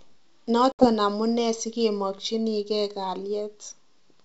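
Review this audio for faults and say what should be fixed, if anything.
There's packet loss on this ADPCM call at 0.72 to 0.90 s: a hard-edged 70 ms silent hole, about what you'd get from a handful of dropped packets. The decoder's predictor and step size lose sync with the sender, so the sound comes back slightly distorted on "amunee sikemakchinikee". Adding packet loss concealment and a jitter buffer, plus resetting the predictor state after a gap, would keep the drop and the recovery artefacts out of the call.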